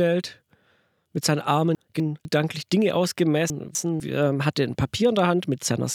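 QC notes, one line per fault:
1.75–2.25 s and 3.5–4.0 s, chunks out of order: both times a 250 ms block of audio turns up one slot late, so it plays after the block that should have followed it. Nothing's missing, but the two quarter-second pieces come out swapped, and you get a brief jumbled, back-to-front moment. There are three hard joins where the swapped pieces butt against each other and the surrounding audio.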